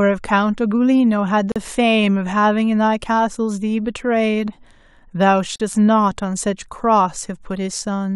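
At 1.52 s and again at 5.56 s, the speech drops out for about 40 ms. These are gaps at joins of encoded pieces, four seconds apart. Each piece kept its encoder start delay and end padding. The speech stops, then resumes where it left off.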